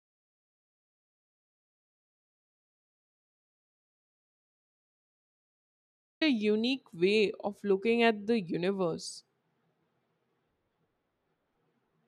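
From the very start the clip is dead silent, and it stays that way until about 6.21 s, when speech suddenly comes in mid-flow. That's an audio dropout to silence. The gap is silent, with no room tone or hiss underneath, so the input was most likely lost, through a disconnected device, a failed link or a mute, while the recorder kept writing empty samples. Whatever was said during that stretch is simply gone.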